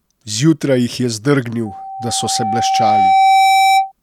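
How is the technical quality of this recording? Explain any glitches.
The recording has one clear fault. From 1.65 s to 3.92 s there is a loudspeaker feedback squeal. The microphone picks up the loudspeaker it feeds, and at 772 Hz the loop gain exceeds one. That single tone swells over roughly two seconds and ends up a little louder than the speech.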